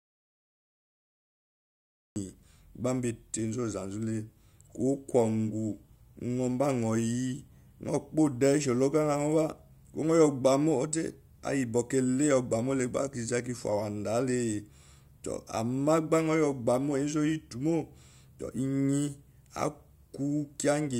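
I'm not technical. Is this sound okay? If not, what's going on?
No. For the first 2.16 seconds there is an audio dropout to silence. The input was most likely lost briefly, perhaps through a loose connection or an accidental mute, while the recording kept running and filled that stretch with silence. So the clip opens with total emptiness, not even faint background noise, and the speech only starts at 2.16 seconds. Anything said during that opening gap was never captured.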